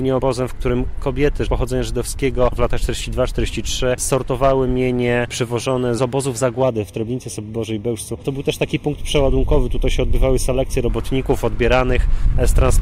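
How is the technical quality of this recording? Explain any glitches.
The recording has one clear fault: channel delay (comb filtering) from 6.63 s to 10.89 s. During that stretch, one channel arrives roughly a third of a millisecond behind the other, and the two are summed to mono. Material common to both channels cancels at evenly spaced frequencies, with the first notch near 1.5 kHz and further notches above it. The sound turns hollow and phasey, losing presence in those fixed bands until the alignment returns.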